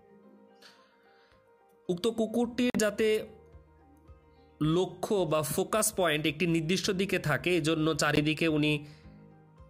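Packets likely reached the headphones too late and were discarded, a Bluetooth dropout: silent holes at 2.70–2.79 s and 8.16–8.23 s, after which the sound resumes as though it had kept playing.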